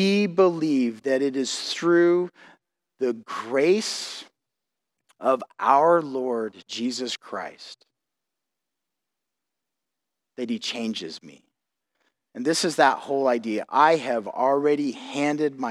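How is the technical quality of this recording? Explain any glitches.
No technical faults can be heard anywhere in the recording, and the speech signal stays continuous and stable throughout.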